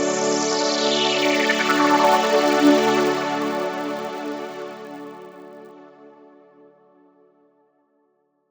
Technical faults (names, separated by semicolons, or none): resampler restarted on every block